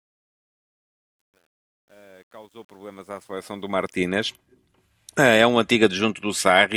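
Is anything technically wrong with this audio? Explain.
Yes. Truncation distortion on a fade runs from the start to 4.06 s, over a fade-in. It is worst up to 3.17 s. The gain stage dropped low bits without dither, which fits a path keeping about 10 bits. The quiet opening therefore sounds gritty. The waveform shows stair-stepped, squared-off segments. The spectrogram shows broadband fuzz instead of a smooth rise.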